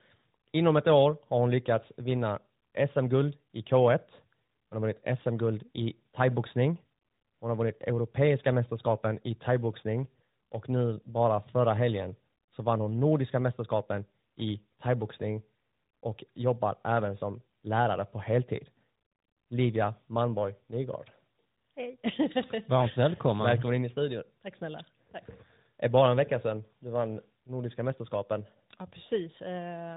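This speech clip sounds rougher and noisier than a single phone link would, with a muffled, warbly quality and nothing above 3.8 kHz, from start to finish. That points to tandem speech coding: the call passed through two speech codecs in a row, an ADPCM stage like G.726 and a model-based AMR-NB stage. Between them it was decoded to plain telephone PCM, so each coder re-encoded the previous one's already damaged output and their errors piled up.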